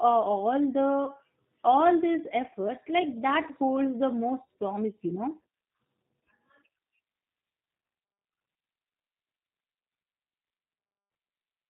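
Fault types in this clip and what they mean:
G.729 codec: The whole speech clip passes through a low-rate VoIP codec, running at 8 kbit/s. It does not send the waveform. It sends a vocal tract filter, a pitch predictor and a few pulses per short frame, and the decoder rebuilds speech from those. The damage is plainly audible here. Voices sound rough and slightly synthetic. Nothing above 4 kHz comes through, so the sound is dull and narrow.
VoIP packet loss concealed by the speech codec: Near 1.05 s, a brief gap is filled in by the decoder. It repeats its last pitch and filter settings and lowers the level. About 20 ms went missing, which fits a single lost packet. The result is a short stretched, fading patch lasting to about 1.11 s. Because each frame builds on the one before, the sound stays weak or distorted going into "all these efforts like".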